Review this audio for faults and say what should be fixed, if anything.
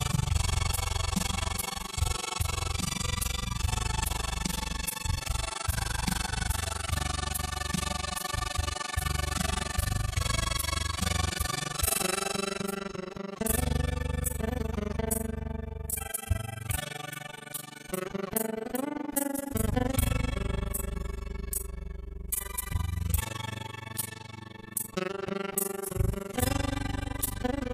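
Overlap-add ripple runs through the entire clip: the level pumps up and down at around 20 Hz, heard as a rough, fast flutter. The frames were windowed and summed with an overlap whose gains don't add to a constant, so each frame boundary dips, here by about 60 dB, nearly silencing the sound once per frame. Unlike gate chatter or dropouts, the pulsing is perfectly regular and never tracks the signal level. To prevent it, pair the window shape with a hop size that meets the constant-overlap-add condition, such as a Hann window at 50% overlap.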